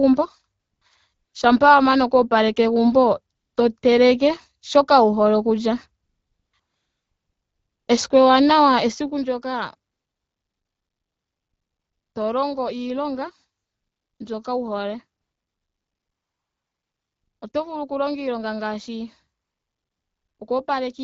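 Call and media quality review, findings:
AMR comfort noise: eleven pauses from 0.59 to 20.39 s, ranging from single 20 ms blips at 3.79 and 17.51 s up to about 2.2 s (9.91–12.15, 15.21–17.41 s). Real background drops out and a smooth, steady hiss takes over, switching in and out. The phone's DTX decided nobody was talking and stopped sending frames, so the far end is synthesising noise from a rough level/spectrum sketch. Watch for clipped word tails at the edges.

Zipper noise: 8.94–9.30 s, gain pulled down about 10 dB in 2 dB stairs, roughly 20 a second. Fast ticking or zipping riding on the audio while the level moves. Likely an unsmoothed gain stage, stepping once per buffer. Each jump leaves a small click, and the AMR-WB speech underneath stays clear.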